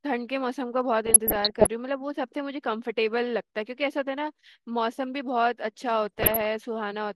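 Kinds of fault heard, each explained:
DAB burbling: at 1.06–1.67 s and 6.03–6.55 s, uncorrected bit errors (roughly 0.5% and 0.7%, hitting 27 and 22 frames) corrupt MP2 sub-band data, putting short blips of noise into single sub-bands over the speech.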